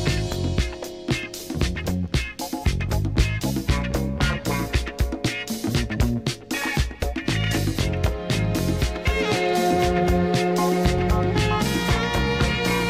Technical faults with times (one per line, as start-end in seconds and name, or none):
5.26 dropped buffer (overrun)
7.02 dropped buffer (overrun)
9.33 dropped buffer (overrun)